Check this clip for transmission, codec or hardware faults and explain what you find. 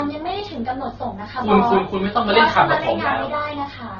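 One codec fault runs through the whole recording.

Transcoding between lossy codecs, present throughout: the speech most likely passed through a low-rate MP3 stage and was then re-encoded with Opus at a rate that fits about 12 kbit/s. The second encoder wastes its small budget reproducing the first encoder's damage and adds its own, so both kinds of artefact are heard together: smeared, watery detail layered with Opus's coarse roughness. Nothing remains above 6.8 kHz, leaving the sound dull and muffled.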